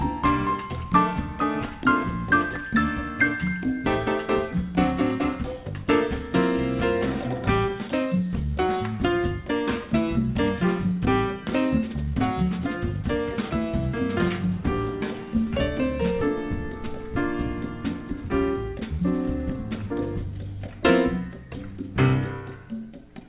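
Nothing here stands out as a fault; the audio comes over a call line with the usual telephone-band sound of a G.711 mu-law codec, with nothing above 4 kHz.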